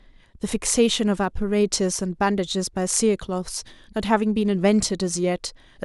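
Nothing in this bit of speech stands out as a technical fault, so there's nothing here to flag.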